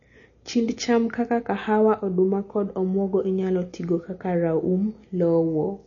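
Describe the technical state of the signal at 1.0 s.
At 1.0 s you're hearing MP3 compression damage, and it's there for the whole clip, not just that moment. Nothing comes through above 7 kHz, so the speech sounds dull and boxed-in. Weak spectral detail flickers in and out between frames, giving that watery, swirly texture, especially on s sounds. The encoder was likely starved of bits, and the damage fits a low rate around 32 kbps.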